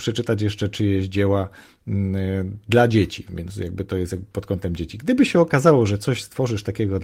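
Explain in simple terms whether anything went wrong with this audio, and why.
Nothing went wrong that a careful listener would notice; no problems stood out at any point in this speech recording.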